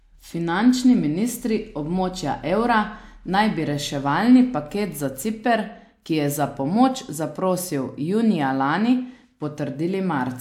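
No dropouts, clicks, distortion or timing disturbances can be heard anywhere in the recording.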